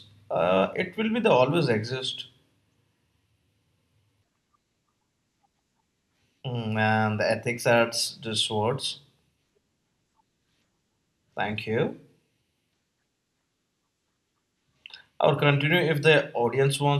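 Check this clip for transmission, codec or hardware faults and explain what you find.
Nothing turned up here; the speech comes through with no transmission, codec or hardware trouble to point to.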